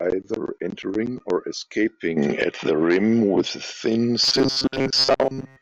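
From 4.22 s on, robotic sound from repeated short buffers: a rigid 133 Hz buzz, likely looped 7.5 ms chunks, with flat spectrogram stripes and largely repeating waveform cycles.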